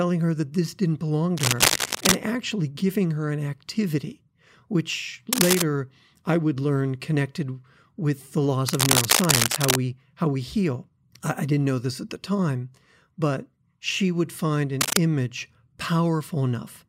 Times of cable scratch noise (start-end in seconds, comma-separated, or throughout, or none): 1.37-2.16, 5.33-5.62, 8.68-9.76, 14.81-14.98